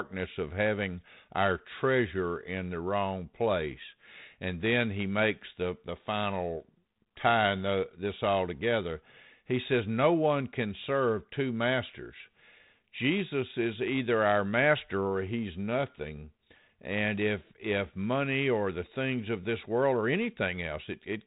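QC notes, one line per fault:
No faults found; the speech passes through the 32 kbit/s G.726 telephone path as expected, with the band stopping at about 3.8 kHz and only light coding texture from the codec.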